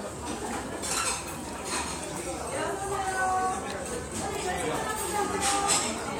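At 4.62 s there is a case of damaged data in a compressed stream: a short run of the encoded bytes arrives corrupted, so the decoder misreads the frames at that point, loses its sync with the frame structure and has to hunt for the next valid header before decoding resumes. What reaches the ear is a brief chirp or blip, lasting only about 16 ms, where the audio momentarily breaks up before carrying on.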